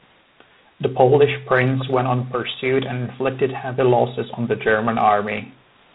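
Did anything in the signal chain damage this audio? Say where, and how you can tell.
Yes. The damage happens at the codec stage, and it lasts the whole clip. This is G.726 ADPCM coding. The speech carries a harsh, rasping hiss that rises and falls with its level. Nothing is heard above 4 kHz. The coder sends only a few bits a sample for the error of its adaptive prediction, so the quantisation noise rides on the signal. The strength of that hiss points to the 24 kbit/s mode.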